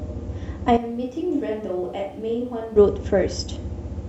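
At 0.77 s the speech suddenly turns roomy and hollow. The bass thins out, and the level drops by around 10 dB. Background noise becomes audible, roughly 35 dB below the speech. This is a switch to a distant microphone. The likely cause is that the close microphone's signal dropped out and a far-off one took over, picking up more room than voice. At 2.76 s the sound snaps back abruptly to its close, full tone.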